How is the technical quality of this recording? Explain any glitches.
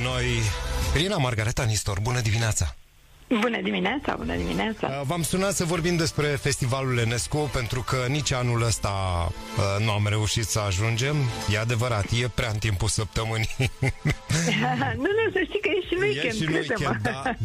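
The technical quality of this recording is sound, and there are no glitches to explain.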